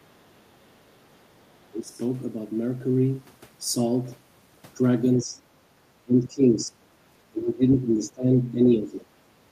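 The speech gets turned down in short patches at 1.71 to 1.95 s, 5.18 to 5.36 s, 6.04 to 6.74 s and 7.32 to 7.62 s. That's speech suppressed in double talk, likely the echo canceller ducking everything while the far end talks over it. The dips run about 10 to 20 dB, deepest in the 6 s stretch.

At 7.70 to 7.74 s a brief scrap of the other side's voice leaks through, likely residual loudspeaker echo the canceller missed. It sits about 25 dB under the speech, so it's a faint blip.

Right after that the suppression comes back at 7.83 to 8.29 s and 8.51 to 9.15 s, with the speech pulled down by about 15 dB each time and sounding dipped.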